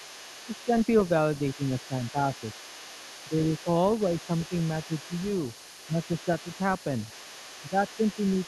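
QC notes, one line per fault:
throughout, other side's voice leaking through: a second, fainter voice runs under the talker for the whole clip, about 20 dB below the main speech. This is likely loudspeaker playback of the far end reaching the microphone and not fully cancelled.
0.65–0.71, 1.56–1.60, 1.88–1.93, 2.12–2.18, 3.63–3.67, 5.87–5.95, 7.62–7.74 s, speech suppressed in double talk: the talker's level briefly dips, by about 5 to 10 dB, for a few tens of milliseconds each time. This is likely the echo canceller attenuating everything while both sides overlap.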